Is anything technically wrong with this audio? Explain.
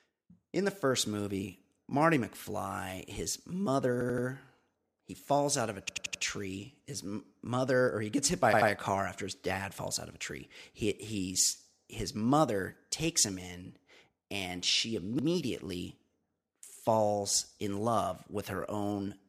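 Yes. Playback repeatedly ran out of fresh audio in time, so the device replayed its last block instead. These repeated-buffer faults repeat roughly 85 ms segments each time, which fits a 4096-sample buffer. The speech stutters, looping a short fragment with a hard join at each repeat. This happens at 4.01 to 4.27 s; at 5.89 to 6.23 s after "falls out of a"; at 8.53 to 8.70 s between "he gets hit by" and "a car after his"; at 15.19 to 15.28 s after "him in and she"; and at 16.73 to 16.81 s.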